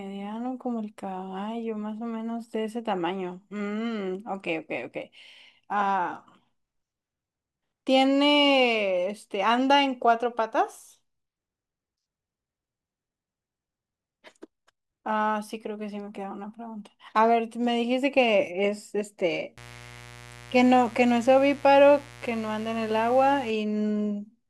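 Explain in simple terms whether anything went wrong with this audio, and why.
Mains buzz runs from about 19.6 to 23.5 seconds: a steady, raspy hum under the speech. Electrical interference from the 60 Hz power supply leaked into the recording, adding sharp spikes twice per cycle, which stack up into a gritty buzz.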